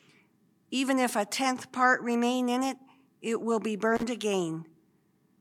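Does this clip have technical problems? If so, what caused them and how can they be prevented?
Yes. An intermittent contact breaks the signal between 3.95 and 4.03 s: a loose cable or plug opens for about 47 ms, so the sound drops to faint hiss, with crackle where the connection breaks and remakes. A waveform shows a short near-flat gap flanked by sharp spikes; a spectrogram shows a dark band bordered by thin broadband vertical lines. Seating plugs firmly and replacing worn cables or connectors prevents it.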